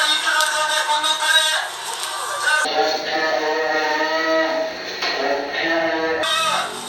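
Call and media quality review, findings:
Stereo read as mono, 2.65 s to 6.23 s. Audio drops to half speed, pitched down an octave (-12 semitones). Faint mirrored image in the upper half of the spectrum. Probable component: decoder or capture path treating interleaved stereo as one channel. Left and right samples play back to back, halving the effective rate.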